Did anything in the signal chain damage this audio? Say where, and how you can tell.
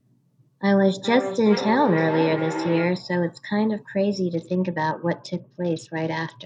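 Yes. A feedback howl runs from 0.98 to 3.12 s, at the call-processing stage where two devices in one room share the call. A tone near 300 Hz swells to about 8 dB below the speech, and the loop repeats about every 400 ms. That delay is the round trip from loudspeaker to microphone and back. Each pass adds gain instead of losing it, so the loop narrows onto its favoured frequency until it breaks.

A Bluetooth SBC bit pool drop starts at 4.34 s and continues to the end, in the codec on the wireless link. The treble dulls and a gritty, granular noise sits under the speech. This fits the bit pool falling from 28 to 8, about 72 kbps, as the phone cuts its rate on a congested link. With so few bits, the upper sub-bands get little or nothing and the remaining bands are coarsely quantised.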